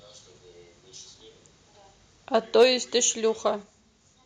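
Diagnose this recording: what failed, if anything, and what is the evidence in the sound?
Microphone overload at 2.60 to 2.66 s: the loudest speech peaks are flattened at the converter's ceiling, giving a brief harsh crackle. The input gain was likely set about 2 dB too high for the analogue-to-digital converter, so a noticeable share of samples in that stretch clip.

Microphone volume stepped down at 2.63 s and 3.63 s: the voice and background each drop by about 3 dB at once, the first right inside the distorted peak. This is likely call processing reacting to the overload and cutting the device's input gain in discrete steps.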